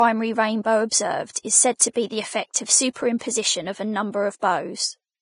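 Throughout, likely Vorbis compression at a low bitrate makes the speech hissy and grainy. A spectrogram shows nothing above 10.6 kHz and speckled, noisy treble beneath it.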